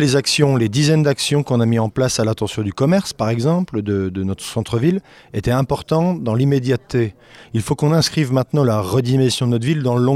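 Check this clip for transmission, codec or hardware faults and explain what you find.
No faults detected.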